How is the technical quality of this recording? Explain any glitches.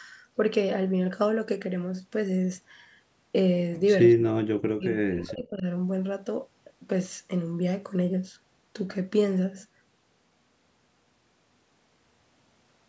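There's one real glitch, from 4.14 to 5.65 s, and it's a case of speech suppressed in double talk. For about a second and a half the voice sinks sharply, at its deepest by something like 40 dB. The likely cause is the far end talking at the same moment: the echo canceller couldn't tell the local talker from its own loudspeaker echo and clamped down on both. The band topping out at 8 kHz is just the call microphone processing.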